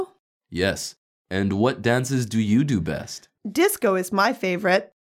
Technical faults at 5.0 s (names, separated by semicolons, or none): none